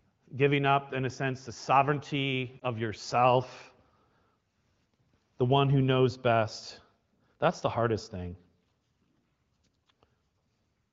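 Right after "a sense the sovereignty", around 2.60 to 2.63 s, there's a brief dip or warble from lost AMR speech frames, which fits a single 20 ms frame concealed before "of yourself".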